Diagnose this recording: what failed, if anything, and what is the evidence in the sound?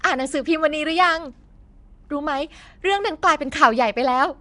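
Nellymoser compression is audible throughout the speech, from start to finish, at the codec stage. The voice carries a rough, hissy halo and a smeared, underwater quality, and nothing sounds above about 10.6 kHz. The likely cause is the Nellymoser Asao codec from Flash, which spends a fixed small bit budget on short blocks, leaves weaker bands unallocated and fills them with noise. The damage level fits a bitrate of around 44 kbps.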